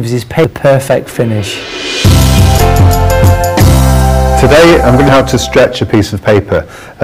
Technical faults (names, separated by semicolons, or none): hard clipping; damaged data in a compressed stream